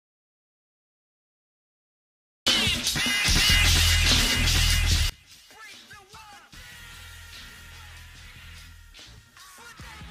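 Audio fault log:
0.00–2.47 s, audio dropout to silence: the clip opens in dead digital silence with no room tone, likely from lost input while recording continued, before sound begins.
5.10–10.11 s, one channel inverted: level falls by about 25 dB, likely from reversed polarity on one channel, cancelling shared content when summed to mono and leaving a faint residue.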